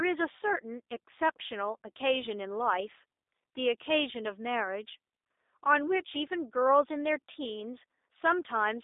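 Throughout, G.729 coding leaves the speech rough and slightly synthetic, consistent with an 8 kbit/s codec; the spectrogram shows energy confined to 300 Hz–3.7 kHz, empty above.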